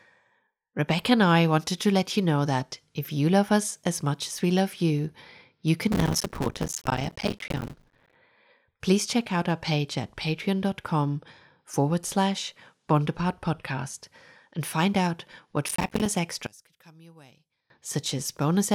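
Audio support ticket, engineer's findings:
Processor overload crackle at 5.92–8.15 s, after "we love you you", and at 15.69–16.11 s, after "and find out what". Gritty tearing over the speech. Audio processing is missing its deadlines. Each miss leaves a silent gap of around 5 ms, which fits a small buffer.

Level collapse, about 27 dB, at 16.47–17.70 s. Speech turns faint. Likely one channel inverted: polarity flipped on one side of the stereo pair, so the shared centre content cancels when the channels are summed to mono.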